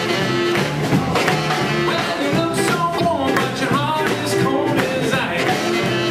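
At 2.97 s the audio jumps ahead, and the next 40 ms or so, up to 3.01 s, come out garbled. That stretch may sound like a chirp, a burst of noise or a brief gap. The likely cause is a broken MP3 bit reservoir. MP3 frames, here 26.1 ms long, store part of their data in earlier frames. When frames are cut out, the frame after the cut reaches back and decodes bytes that belong to a different frame.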